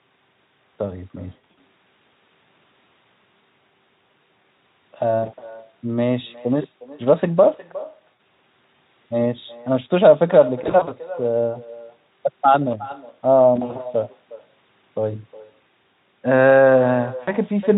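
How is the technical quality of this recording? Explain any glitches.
The recording has two problems: a persistent echo and repeated short dropouts, while the Speex coding itself adds little audible damage.

Echo with no canceller runs through the whole clip. The far end plays the call over a loudspeaker, its microphone picks that sound up again, and nothing subtracts it before it is sent back. Every phrase returns roughly 0.4 s later as a quieter copy, about 18 dB down, thinner than the original. It trails each utterance like a faint second voice.

VoIP packet loss concealed by the speech codec occurs six times: 1.29–1.60 s, 5.25–5.51 s, 8.13–8.20 s, 10.64–10.95 s, 13.55–13.82 s and 17.23–17.32 s. When packets go missing, the decoder fills the gap by extending the last pitch and spectral shape while lowering the level, and each new frame is built on that guess. The worst burst, near 1.3 s, loses 180 ms spread over 280 ms, with the longest single gap lasting 60 ms. 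The other bursts lose between 40 and 120 ms. Each one sounds like a brief buzzy or smeared patch that fades, and the sound stays weak for a moment after the stream recovers.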